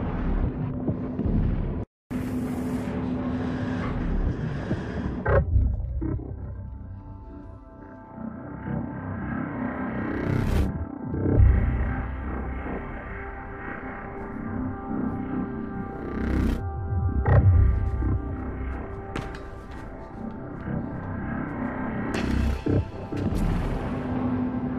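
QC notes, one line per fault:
No audible faults found.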